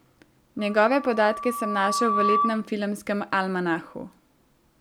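A microphone is picking up the loudspeaker it feeds, and the loop gain tops unity at 1.2 kHz, so this speech recording carries loudspeaker feedback squeal from 0.59 to 2.72 s: a steady tone swelling over roughly a second and a half to about 5 dB above the speech.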